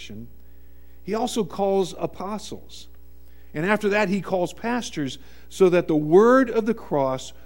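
No technical faults can be heard anywhere in the audio, so there are none to describe in time order.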